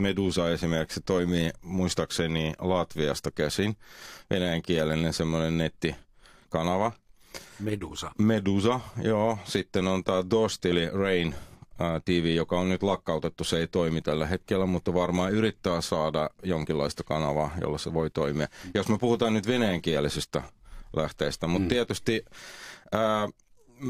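A run of compressed frames was never decoded, either missing from the stream or rejected by the decoder as damaged, so at 10.66 to 10.72 s the speech lurches forward by about 20 ms of audio. This is the compressed frames skipped fault. The gap lands as a tiny stumble in the flow of the speech.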